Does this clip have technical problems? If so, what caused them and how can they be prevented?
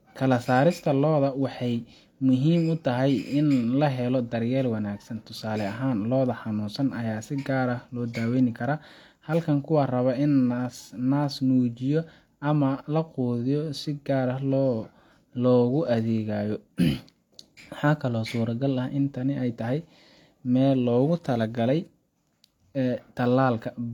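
Yes. The speech is a case of low-bitrate audio saved at a high bitrate throughout. It keeps the artefacts of a heavily compressed earlier encoding, and a spectrogram shows nothing above 18.5 kHz. The sound points to a low-bitrate HE-AAC source that was likely re-encoded as high-bitrate MP3, which cannot restore what the first encoding discarded. To prevent it, encode from the original uncompressed source rather than from an already compressed copy.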